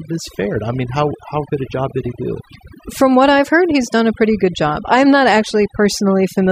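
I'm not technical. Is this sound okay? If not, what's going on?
No, it's not quite right. Overdone noise removal runs through the whole clip: the background drops and breaks up into twinkly specks.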